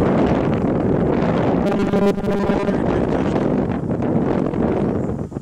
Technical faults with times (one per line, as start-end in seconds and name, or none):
1.66-2.73 robotic sound from repeated short buffers